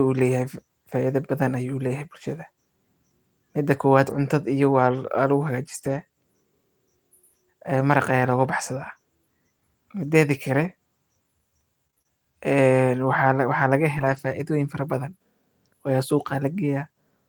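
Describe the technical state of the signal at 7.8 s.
At 7.79 to 7.81 s there is a lost packet rebuilt from error correction. The 20 ms stretch, consistent with a single lost packet, was replayed from a low-bitrate redundant copy, so nothing drops out. It sounds briefly rougher and noisier. The waveform stays continuous, while the spectrogram shows a short, smeared, grainier slice.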